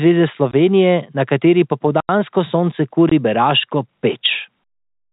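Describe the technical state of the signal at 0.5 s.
A block of digital silence runs from 0.51 to 0.53 s: for about 21 ms the sound drops to silence, a length that fits a 1024-sample buffer. The telephone-band sound cuts off and returns abruptly around a brief hole.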